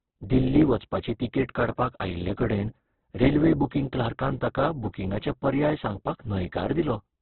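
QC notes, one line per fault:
Throughout: likely Opus compression in its music (CELT) mode. Narrowband, heavily damaged speech sounds rough and grainy as starved bands are filled with noise rather than left empty. A spectrogram shows a hard ceiling at 4.2 kHz over speckled, smeared texture, consistent with roughly 8 kbps.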